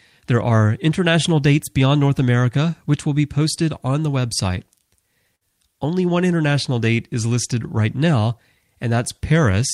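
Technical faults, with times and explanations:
5.35 to 5.43 s, burst of packet loss: a short run of packets arrived too late or not at all, so the receiver extended the last sound for 55 ms while fading it, giving a brief held buzz or hiss, then resumed with 60 ms of speech missing.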